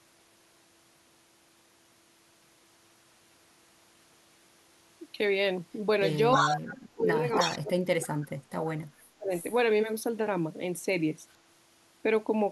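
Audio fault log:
6.11 to 6.16 s, echo leak: a brief, faint repeat of the speech trails it by 313 ms, likely loudspeaker pickup that the far side's echo canceller missed.
6.33 to 6.61 s, echo leak: a 313 ms delayed copy returns about as loud as the original speech, likely a loudspeaker echo the canceller failed to remove.
6.63 to 7.24 s, speech suppressed in double talk: the speech dips by as much as about 30 dB for roughly half a second, likely the canceller turning down its own talker along with the echo.
7.34 to 7.58 s, echo leak: another full-strength echo arrives 313 ms behind the speech, likely the loudspeaker signal leaking past the echo canceller and being sent back.
7.44 to 8.72 s, speech suppressed in double talk: the speech dips by as much as about 35 dB for roughly a second in total, likely overlap confusing the canceller.
9.02 to 9.33 s, speech suppressed in double talk: a short cut of up to about 35 dB lasting about 0.3 s, likely the canceller attenuating the talker during overlapping speech.
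9.30 to 9.59 s, echo leak: a quieter echo, well below the speech, follows it at 313 ms, likely residual loudspeaker pickup the canceller let through.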